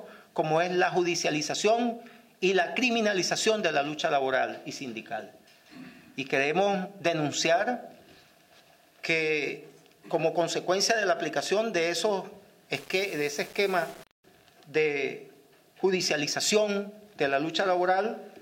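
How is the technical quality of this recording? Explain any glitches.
There's one glitch, in a stretch near the end. From 12.74 to 14.24 s the audio turns grainy and gritty. That's low bit depth without dither, likely from rounding down to about 6 bits. The rounding error tracks the signal, so the grit shifts with the sound, sitting around 25 dB below it.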